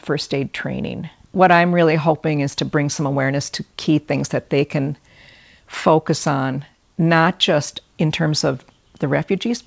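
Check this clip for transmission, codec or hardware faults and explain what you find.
No transmission, codec or hardware faults can be heard in the speech. It has clearly gone through a call path, and the lack of any content above 8 kHz fits a wideband codec such as G.722.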